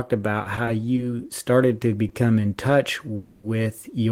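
Between 0.43 and 0.98 s, just before "started to", the sound catches and drags through four brief hitches, none longer than 20 ms, adding about 50 ms in all. This is repeated stalls (stutter): packets reached the receiver late, the jitter buffer kept running dry, and each gap was bridged by continuing the last sound, so nothing is lost.

Right after "in touch", from 3.16 to 3.46 s, the audio hangs for 280 ms as a held, buzzy continuation of the last sound before resuming where it stopped. This call audio freeze likely came from packets held up in transit emptying the jitter buffer, inserting a gap with nothing missing.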